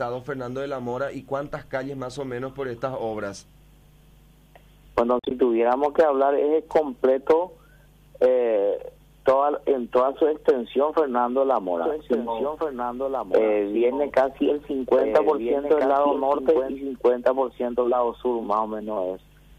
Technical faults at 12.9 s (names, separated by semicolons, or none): doubled audio track